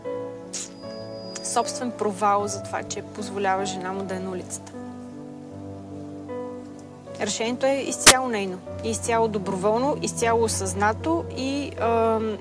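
At 8.07 s, running to 8.11 s, there is a file-tags-played-as-audio fault: an embedded cover picture, stored as compressed data, is decoded as if it were samples. The result is a 40 ms burst of very loud white noise with abrupt, hard edges.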